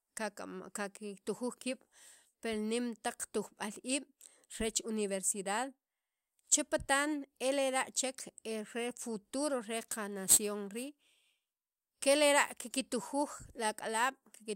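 A speech clip where, from 9.77 to 11.77 s, just after "e re futuro re", a gritty, inharmonic fizz rides on the louder, brighter sounds, roughly 10 dB below the speech itself. This is crude rate conversion: samples were repeated by nearest-neighbour picking without filtering, consistent with a 44.1 to 48 kHz change, leaving a patterned error that produces unrelated tones.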